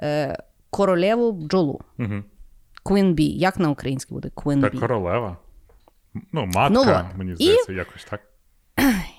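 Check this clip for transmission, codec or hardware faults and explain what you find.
Nothing stood out on listening to this speech recording.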